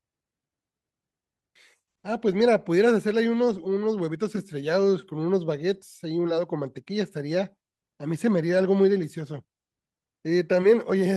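No technical faults are audible.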